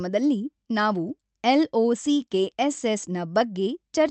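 No technical faults can be heard in this speech.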